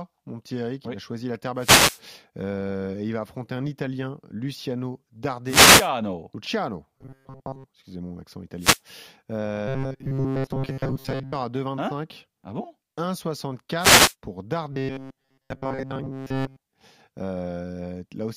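Wireless microphone noise hit at 1.56 to 2.02 s, just after "a choisi la terre": a brief swish of static over the speech as the analogue FM radio signal fades where reflections cancel, so receiver noise rises. A second hit follows at 5.45 to 5.90 s.

Robotic sound from repeated short buffers at 6.98 to 7.65 s, just before "excusez mon accent": the speech turns into a rigid metallic buzz near 134 Hz that still roughly tracks the syllables. The likely cause is audio arriving too seldom, with the software looping the last fragment of about 7.5 ms to fill the gap, so most of the real sound is skipped.

Another noise hit at 8.58 to 8.81 s, after "excusez mon accent", then the same 134 Hz buzz at 9.68 to 11.33 s. A further static burst comes at 13.78 to 14.15 s, and the buzz returns at 14.72 to 16.61 s.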